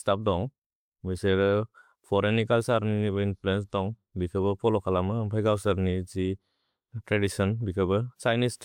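Nothing stood out on listening to this speech recording.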